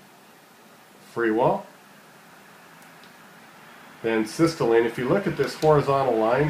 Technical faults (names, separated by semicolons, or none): none